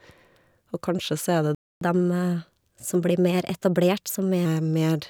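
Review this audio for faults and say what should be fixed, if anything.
A playback stall cuts the speech dead from 1.55 to 1.81 s, about 260 ms of silence, most likely because the player ran out of buffered data or its audio thread was blocked. On a waveform it shows as a flat gap, and on a spectrogram as a blank vertical band with abrupt edges.

Catch-up at higher speed follows from 1.81 to 4.46 s. The player resamples its backlog at 1.1x to recover the lost time, so the speech runs faster and sits about a semitone and a half higher before returning to normal. A spectrogram shows the harmonics shifted upward and the syllables compressed in time across that stretch.

Both faults come from the same stall, so a deeper jitter buffer, an unblocked audio thread, and time-stretching that holds pitch steady during any catch-up would prevent them.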